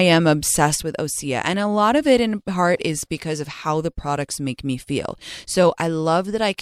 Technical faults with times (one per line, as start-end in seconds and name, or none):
0.83-6.61 one channel drops out